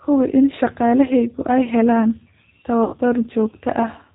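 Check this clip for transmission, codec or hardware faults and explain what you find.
Two faults are present: low-bitrate speech coding across the whole clip, and one concealed packet loss near the end.

The G.729 codec runs throughout. The system rebuilt the speech from a vocal tract filter, a pitch estimate and a few pulses per short frame, which fits the 8 kbit/s G.729A variant, with nothing carried above 4 kHz. The damage is plainly audible: the speech is dull and band-limited, with a rough, slightly synthetic texture.

VoIP packet loss concealed by the speech codec occurs from 2.84 to 2.97 s. About 90 ms of packets failed to arrive, and the decoder filled the gap by extending its last pitch and filter settings at falling gain. The speech there smears into a fading buzzy tone or coloured noise instead of cutting to silence. Because each frame depends on the previous one, the sound stays weak or distorted briefly after packets resume.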